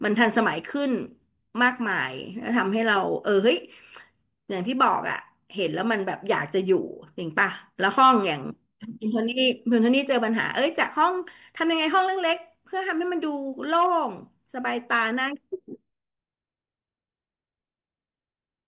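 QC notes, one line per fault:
No faults found in the speech. Nothing needed a time stamp, so there is nothing to log.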